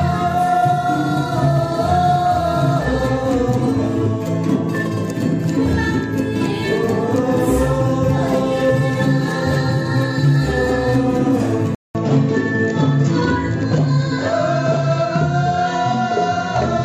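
Input switched to a poorer device, from 11.75 s to the end: after a 200 ms gap, the sound loses everything above 7.6 kHz and turns duller, with a faint new noise floor at a similar level, likely because recording moved to a different, narrower-band microphone.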